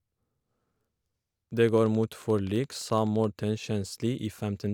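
Likely interference injects a train of clicks from 1.69 to 3.25 s: about twenty regular ticks, 11.6 per second, roughly as loud as the speech.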